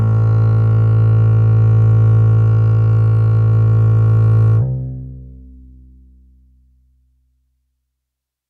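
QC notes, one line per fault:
4.62–8.49 s: section at the wrong speed. The music jumps to 1.16 times its speed, so it plays hurried and about three semitones higher. This is likely from a wrong playback clock. On a spectrogram, every harmonic steps upward at 4.62 s, and the waveform's periods compress.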